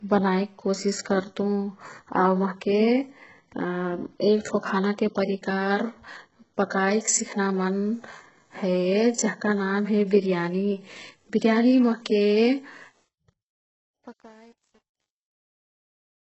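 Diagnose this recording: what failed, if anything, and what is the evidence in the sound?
A codec stage, likely HE-AAC at a very low bitrate around 8 kbps, damaged the speech heavily throughout. Nothing reaches above 8 kHz, and the upper band is rebuilt from copied lower bands, so harmonics misalign across the crossover and s sounds turn gritty, metallic or lispy.

The closing fade passed through an undithered volume stage that kept too few bits, consistent with about 9-bit resolution. From 12.81 s to the end the decaying waveform collapses into coarse square steps. Truncation distortion is worst from 13.29 s onward, where the quiet tail turns gritty.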